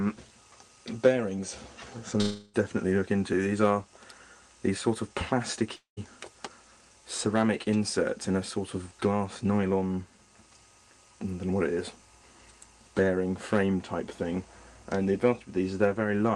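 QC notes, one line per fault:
2.21–2.56 s and 5.76–5.99 s, long network dropout: the sound smears into a fading buzz, going briefly silent the second time, then skips past the gap. Likely lost packets.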